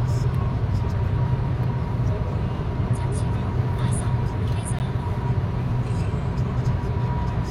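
A gap between stream segments occurs at 4.79 s, where the audio drops out for about 14 ms. The timestamps of two adjacent segments, which fit a 2-second segment length, leave a small hole between them, and the player fills it with digital silence. The sound stops and resumes with hard, abrupt edges, giving a brief click-like break. Nothing is missing from the audio itself; the extra silence simply pushes the rest of the sound slightly later.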